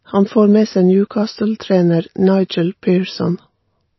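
Speech, with MP3 compression damage plainly audible from start to finish. Nothing survives above 5.8 kHz, so the top end sounds dull. Weak detail flickers in and out, giving a watery, swirly texture. This is likely a low-bitrate MP3 encode, around 24 kbps.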